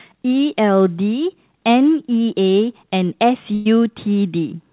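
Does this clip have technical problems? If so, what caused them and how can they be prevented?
Yes. A burst of packet loss struck at 3.54 to 3.67 s. Several consecutive packets of this speech never reached the receiver in time, so it filled about 112 ms by stretching the last received sound and fading it down, which comes out as a brief held buzz or hiss. Playback then resumes with roughly 120 ms of the original missing, so the sound jumps ahead. The call audio's cut-off at 4 kHz fits a narrowband codec such as G.711. Using forward error correction or redundant packets, along with a more stable network path, would keep such bursts from leaving gaps.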